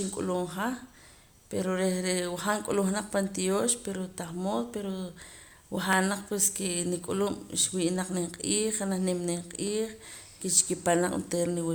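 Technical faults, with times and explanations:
5.93 s and 9.67 s, dropped samples: two single sharp clicks in the speech, likely from a fraction of a millisecond of samples going missing. The waveform jumps abruptly to a later value, and the spectrogram shows a thin vertical line running across all frequencies.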